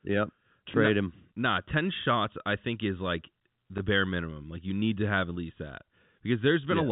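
At 0.72 to 0.74 s, a packet is lost and the last packet is played again in its place. It happens once more at 3.78 to 3.80 s, between "I think is like" and "bare minimum". Each gap lasts 20 ms, which fits a single lost packet. The repeated audio seldom lines up with the pitch, and each single repeat sounds like a small blip. The band is telephone-narrow, from the G.711 coding.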